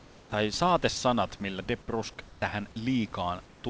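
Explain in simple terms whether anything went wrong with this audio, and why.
Yes. In the pauses, the call likely stopped sending sound and filled the gap with comfort noise in place of the background: a flat, slightly quieter hiss at 0.00–0.32, 2.26–2.42 and 3.46–3.64 seconds.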